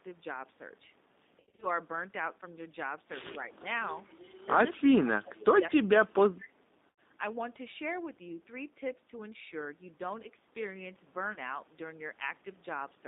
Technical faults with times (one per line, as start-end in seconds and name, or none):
0.00-13.07 G.729 codec
1.40-1.67 VoIP packet loss concealed by the speech codec
4.71-6.59 speech suppressed in double talk
6.93 VoIP packet loss concealed by the speech codec
11.33-11.38 VoIP packet loss concealed by the speech codec